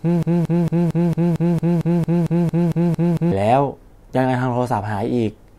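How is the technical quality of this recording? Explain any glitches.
The recording has one serious glitch: a broken-record loop that is already under way when the clip begins and lasts until about 3.32 s. A fragment of speech about 0.23 s long repeats back to back, 14 times. The likely cause is a stalled player, encoder or stream resending the last fragment it held, so the speech that should have filled those seconds is lost. What marks it as a loop rather than an echo is that each pass is an identical copy at the same level, with no decay.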